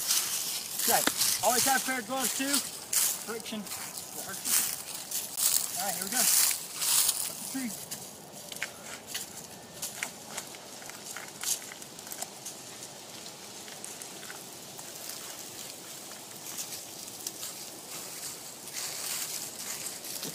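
At 5.36 s the sound drops out for about 16 ms, a brief hard gap before it carries on. The likely cause is a Bluetooth stall: radio interference delayed packets, the receiving buffer emptied, and playback halted until the retransmissions arrived. On a waveform this shows as a flat, near-silent notch; on a spectrogram, a thin vertical blank band across all frequencies with sharp edges either side.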